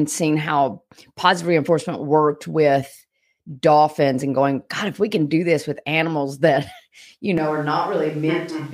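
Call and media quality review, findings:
Speech abruptly roomy, hollow, bass-thin from 7.38 s to end, about 5 dB quieter: likely switch to a distant microphone. Spectrogram: step-down in low end, reverb smear, raised noise floor.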